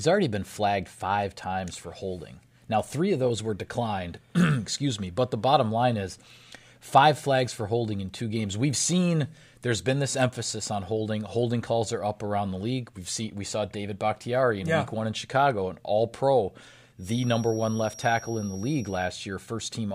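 From 16.96 s to 19.16 s, a thin, steady whistle at 5.7 kHz sits behind the speech, swelling and fading slowly in level and staying roughly 20 dB below it. This is a feedback whistle. The likely cause is a loudspeaker-to-microphone loop held right at the edge of feedback: that single high frequency keeps recirculating through the loop and sustains itself, but the gain is not quite enough for it to build up and howl.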